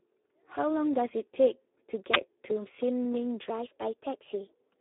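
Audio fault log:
Throughout: Speex codec. The speech sounds hoarse and grainy. The coder has too few bits to model the excitation between pitch pulses, so that detail is replaced by noise. The damage is heavy, which fits an 8 kbps setting. Nothing is heard above about 3.8 kHz. The audio sits in a narrow line band of roughly 300 Hz to 3.7 kHz. That gives the thin, boxed-in telephone quality.
2.14–2.16 s: uninitialised buffer. A sudden, loud burst of harsh digital noise cuts through the speech. It lasts about 23 ms. A block was sent to the output before any audio had been written into it. Stale memory was then played as if it were samples. The length of the burst fits a 1024-sample buffer. The noise has nothing to do with the surrounding sound, so it stands out sharply.
3.5 s to the end: section at the wrong speed. From 3.5 s the speech runs 1.15 times too fast. It sounds hurried and higher, raised by about two semitones. 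Speed and pitch shift together at one moment and stay shifted to the end of the clip. The likely cause is this last stretch being played against the wrong clock.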